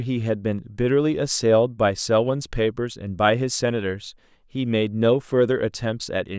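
Nothing in the speech stood out as a technical problem on listening.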